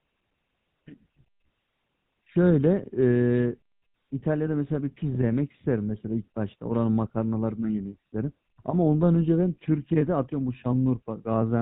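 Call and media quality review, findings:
Buzzy, gravelly roughness on the speech throughout, plainly audible; band capped near 4 kHz, top end gone. Probable component: GSM full-rate codec, consistent with 13 kbps. Mechanism: vocal-tract model excited by regularly spaced pulses, only every third excitation sample kept, so fine voice texture is replaced by a coarse pulse train, giving the gritty buzz; nothing above 4 kHz passed.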